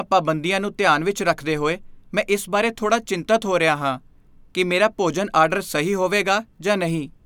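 Nothing in this bit of speech stands out as a technical problem; there's simply nothing here to flag.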